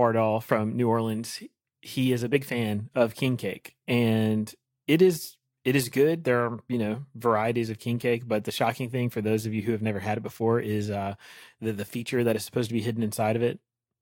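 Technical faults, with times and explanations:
No technical faults can be heard in the speech. Nothing in the audio calls for a time or an explanation.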